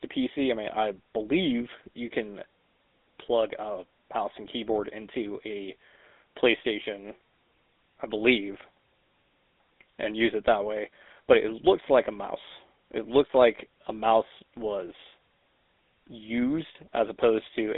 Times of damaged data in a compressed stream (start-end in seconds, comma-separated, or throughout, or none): none